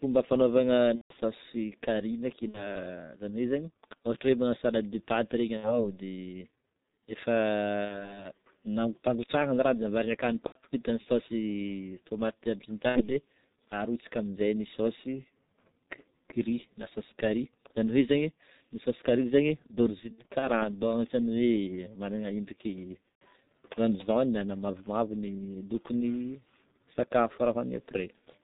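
From the start, the whole recording carries heavy G.723.1 codec damage. This low-rate telephony codec runs at about 6.3 kbit/s with 30 ms frames. Nothing above 4 kHz gets through. Its voice model updates slowly. The speech sounds muffled and hoarse, and consonants are smeared.

VoIP packet loss concealed by the speech codec then breaks in eight times. The first is at 0.95 to 1.14 s, where about 150 ms of frames go missing. Next comes 2.48 to 2.73 s. After "salade de pâtes regny" a gap runs from 5.57 to 5.92 s. Another runs from 7.85 to 8.21 s, just before "nampangotrahagna ny". Between "de avarigna akany" and "vita ny" one spans 10.46 to 10.59 s. Then come 12.89 to 13.05 s and 20.13 to 20.50 s, where short losses are scattered over about 300 ms. The last is 23.09 to 23.24 s. In each, the decoder extends the last pitch and filter at falling gain. The result is a buzzy tone or coloured noise that fades, and the voice stays weak as it recovers.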